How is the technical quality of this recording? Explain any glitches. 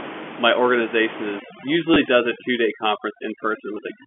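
Two faults stand out in this telephone-band speech recording, where room noise sits about 13 dB under the voice before the processing kicks in.

Overdone noise removal, from 1.39 s to the end: an over-aggressive suppressor gates out bands near its noise estimate, leaving near-silence with twinkling specks. A spectrogram shows dark gaps with scattered isolated dots.

Packet loss with last packet repeated, 1.94 to 1.96 s: the receiver replayed old audio to fill 20 ms, which fits two 10 ms packets. This gives a robotic stutter, visible as repeated identical waveform segments.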